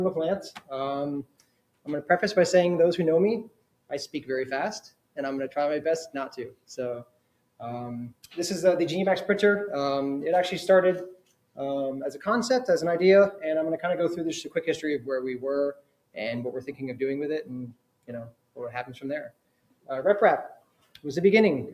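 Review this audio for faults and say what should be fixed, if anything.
A noise suppressor built for speech is running on this sound, treating sustained tones and tails as noise. Level pumps by around 20 dB, so everything feels thin and unsteady.

You'll hear sound cut by the noise suppressor at 0.52–1.88 s, 3.43–5.57 s, 6.48–8.37 s, 11.13–12.27 s and 14.45–21.05 s, where held material sinks by up to about 20 dB while attacks survive.

Next time, bypass speech-oriented noise suppression on this path, or switch it to a music mode.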